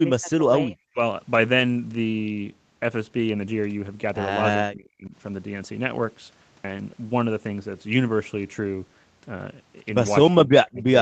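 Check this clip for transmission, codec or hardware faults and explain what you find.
Two kinds of fault are audible: repeated speech suppression in double talk and one lost packet rebuilt from error correction. The audio stops at 8 kHz, which points to a wideband Opus call path.

From 0.0 to 1.01 s, 4.68 to 5.14 s and 10.3 to 10.95 s the speech dips and breaks up, by about 20 dB, 30 dB and 35 dB at its deepest. The likely cause is speech suppressed in double talk: the echo canceller mistook the local talker for loudspeaker echo while the far side spoke, and attenuated both.

At 1.6 s a lost packet was rebuilt from error correction. A single 20 ms frame was replayed from the low-rate copy carried in the next packet, so there is no gap, only a brief rough, noisier patch.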